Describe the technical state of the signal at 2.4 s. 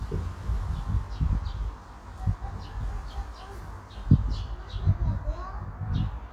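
One channel runs roughly 20 ms behind the other, and at 2.4 s, as throughout the clip, the two are summed to mono. This channel delay causes comb filtering: evenly spaced notches from around 30 Hz upward that leave the sound rough and slightly doubled.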